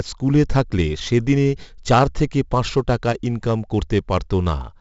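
From start to finish the speech carries the signature of 4-bit ADPCM compression, and the damage is heavy. Each sample is coded as a coarse 4-bit step from a predicted value, so the quantisation error rides on the signal as a gritty hiss that swells with every loud syllable, and sharp onsets smear where the step size lags behind. Nothing reaches above about 7.7 kHz, and the rate of 64 kbps points to a sample rate near 16 kHz.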